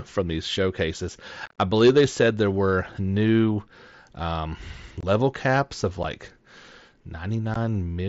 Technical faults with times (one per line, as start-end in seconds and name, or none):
1.46-1.58 unconcealed Bluetooth headset packet loss
5.01-5.03 unconcealed Bluetooth headset packet loss
6.03 unconcealed Bluetooth headset packet loss
7.54 unconcealed Bluetooth headset packet loss